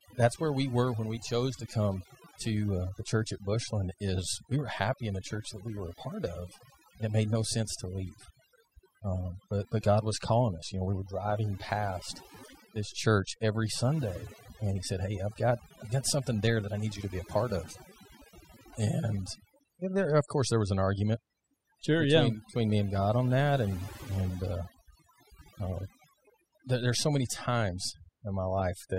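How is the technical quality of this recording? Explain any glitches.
The recording suffers from overdone noise removal for its full length. A noise reduction stage set far too aggressively shuts off individual frequency bands whenever they sit near its noise estimate, taking quieter parts of the speech with them. The background drops and breaks up into twinkling, warbling specks.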